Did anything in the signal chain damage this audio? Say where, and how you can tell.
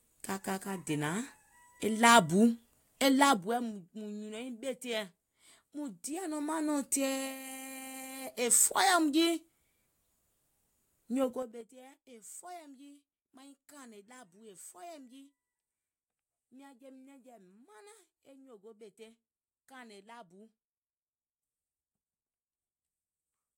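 Yes, there's zipper noise from a gain stage stepping the level of this speech instead of ramping it. At 3.25–3.81 s, 5.94–6.78 s and 11.24–11.70 s the level jumps in unsmoothed 2, 1 and 5 dB steps, around ten a second. Each jump ticks audibly.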